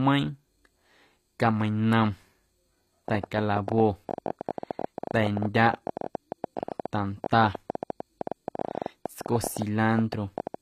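HE-AAC compression runs throughout the speech, with plainly audible codec damage and nothing above 15 kHz, which fits a low rate near 24 kbps. The treble is likely rebuilt by spectral band replication from copied lower bands, so harmonics misalign and sibilants sound gritty or metallic.

A train of clicks runs from 3.08 s to 10.55 s: about a hundred similar pulses at an irregular pace averaging 12.2 per second, peaking roughly 10 dB above the speech. They are likely interference or a faulty connection or supply, heard as ticking over speech and pauses alike.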